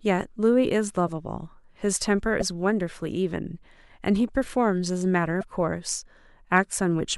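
At 2.39 s and again at 5.40 s the speech breaks for about 30 ms and resumes slightly further along, a brief glitch roughly one 26.1 ms frame long. The likely cause is a broken MP3 bit reservoir: frames went missing, and the following frame borrowed its data from bytes belonging to a different frame. On a spectrogram each event appears as a thin vertical seam where the harmonic pattern cuts off abruptly; the waveform shows an abrupt discontinuity.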